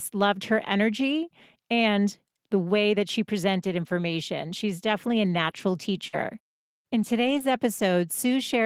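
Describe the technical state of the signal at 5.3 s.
Lost packets rebuilt from error correction, 5.25 to 5.59 s, just after "definitely a": low-bitrate copies carried in the following packets fill the gap, so the speech continues but sounds rougher and noisier.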